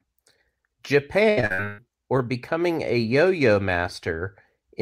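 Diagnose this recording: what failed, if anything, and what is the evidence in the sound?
Repeated packet loss (robotic sound) from 1.29 to 1.80 s, just before "or becoming a", points to the network stage. The speech turns choppy over about five gaps, the longest 137 ms. Concealment stretches the last sound into each hole, covering about 60 percent of that span.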